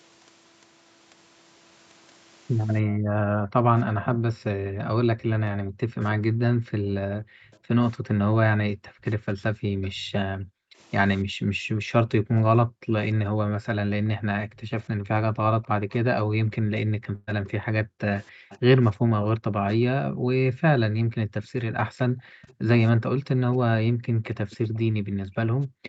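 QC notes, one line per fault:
2.83–25.88 s, background gated by the echo canceller: From 2.83 s to the end, the room sound ducks and drops out. The canceller pulls the microphone down hard while the far-end loudspeaker plays, by as much as about 40 dB at its deepest, then releases.
4.04–4.08 s, 7.51–10.02 s, 14.55–18.58 s, 21.44–22.54 s and 24.50–25.88 s, echo leak: A faint delayed copy of the speech trails the original by 291 ms. It is strongest in the brief scrap at 4.04 s, at about 15 dB below the speech, and elsewhere sits roughly 20 to 30 dB down. A likely cause is a loudspeaker echo the far end's canceller failed to remove.
17.15–17.29 s, burst of packet loss: About 120 ms of audio goes missing. The receiver fills 118 ms by holding the last sound and fading it, so it smears into a held tone or hiss. Playback then jumps ahead past the lost stretch.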